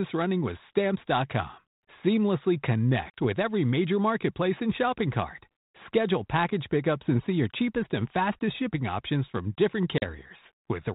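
Speech over a 32 kbit/s G.726 ADPCM link (band-limited below 4 kHz) shows packet loss on an ADPCM call at 3.10–3.13 s and 9.98–10.06 s. Each gap drops about 40 ms of audio, a couple of packets, and is filled with silence. That appears as a flat, hard-edged hole in the waveform and a blank vertical strip on the spectrogram. Because the decoder's predictor and step size lose step with the sender's, the sound resumes slightly distorted and settles within tens of milliseconds.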